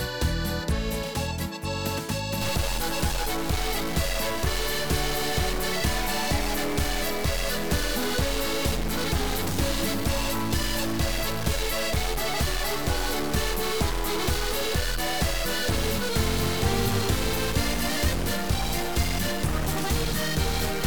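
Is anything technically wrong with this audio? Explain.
Yes. From 2.41 s right through to the end there's a stuck bit. It sounds like harsh, buzzy distortion riding on everything, and the quiet stretches fill with a gritty noise floor instead of going silent. That fits one data bit likely being jammed at 0 or 1. Roughly half the samples land off by that bit's weight, a step of around -25 dBFS, and since the bit also flips with the sign of tiny values, the pauses turn noisy.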